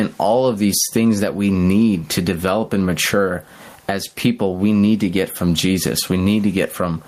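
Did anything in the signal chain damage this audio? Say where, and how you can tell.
Yes. Gain pumping runs through the whole speech clip. The gain swings by roughly 15 dB, recovering in the pauses and ducking each time the speech gets loud, and loud and quiet passages sit squashed close together in level. The likely cause is input gain set far too high at the microphone stage, with a fast limiter or compressor hauling it back down on every loud sound. A noise gate would instead drop the background toward silence in the gaps.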